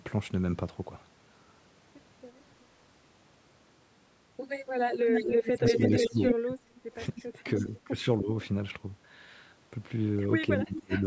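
From 5.06 to 6.35 s, a delayed copy of the speech trails it by 304 ms at roughly the same level, most likely an echo leak through a loudspeaker-side echo canceller. On a spectrogram, the harmonic traces appear doubled, with a ghost set shifted right by about 0.3 s.

Overlapping it, from 5.39 to 7.27 s, the speech drops out in pieces, by about 25 dB at the deepest and for about a second in total. This is likely speech suppressed in double talk, where the canceller turns the near talker down along with the echo. The waveform shows gated holes and the spectrogram shows blank vertical gaps.

At 7.16 to 7.34 s, a faint echo returns at the same 304 ms delay, about 20 dB below the speech, visible only as a weak, offset smear.

Further suppression follows at 7.59 to 8.3 s, a shallower dip of about 10 dB lasting around 0.3 s in total. At 10.6 to 11.05 s, a deep cut of about 30 dB lasts around 0.4 s in total. 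Both appear as notches in the amplitude envelope.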